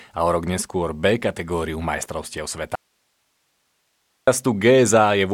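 At 2.75 s, right after "kategóriu majstrovstiev", the speech cuts out abruptly for 1.52 s until 4.27 s. It is an audio dropout to a faint residue: only hiss remains, roughly 50 dB below the speech, likely from a lost signal feed while the downstream path stayed live.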